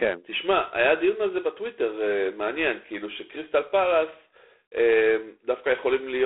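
From start to finish the speech carries G.726 ADPCM damage: a harsh, rasping hiss that rises and falls with the speech level, which fits 24 kbit/s coding with too few bits per sample to track the prediction error. The band runs about 250 Hz to 3.5 kHz, with nothing above 3.8 kHz.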